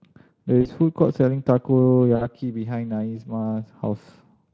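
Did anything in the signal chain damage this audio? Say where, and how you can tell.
Yes. At 0.61 to 0.68 s and 2.15 to 2.27 s the speech smears into a buzzy, fading tone. This is VoIP packet loss concealed by the speech codec, a network fault. The gaps, about 40 and 60 ms, fit two and three lost 20 ms frames, which the Speex decoder filled by extrapolating its last pitch with falling gain.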